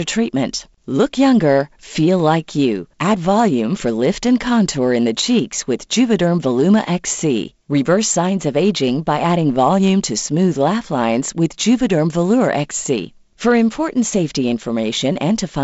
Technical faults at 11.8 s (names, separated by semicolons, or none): none